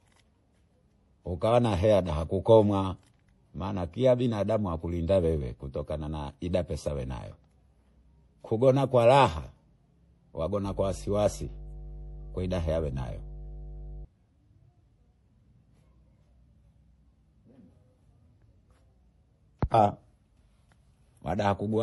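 Speech has likely passed through transcoding between lossy codecs, with the sound pointing to an HE-AAC stage re-encoded as MP3. Nothing remains above 11.5 kHz, and the artefacts of both encoders pile up together from start to finish. From 10.65 to 14.05 s, a ground loop or nearby transformer couples the power line into the signal as mains hum, a steady low 50 Hz tone with low harmonics, sitting roughly 15 dB below the speech.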